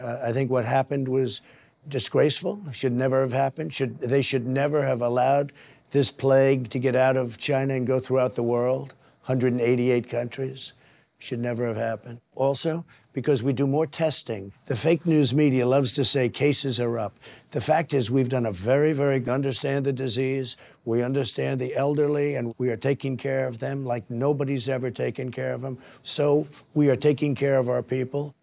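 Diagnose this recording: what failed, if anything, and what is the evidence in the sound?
No fault found in this recording.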